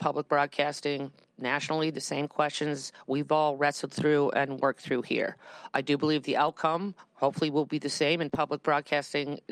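From about 0.82 s to 9.28 s the audio has a faintly unsteady pace, with small hiccups at uneven intervals where tiny pieces seem to stutter or stretch. The whole stretch plays at about 99% speed and ends up roughly a tenth of a second longer than it should. This is clock drift between sender and receiver: the sending device's clock runs around one and a half percent slow compared with the receiving side. The receiver's buffer therefore keeps draining, and it has to keep filling in from the material it already holds. Those fill-ins are the repeated timing corrections. Throughout that stretch the receiver keeps repeating short fragments, always in the same direction, so playback stays in step with the slower sender. Each repeat is brief and lands at irregular spacing, which is why they come across as scattered slight hitches and a wavering tempo rather than one clear glitch.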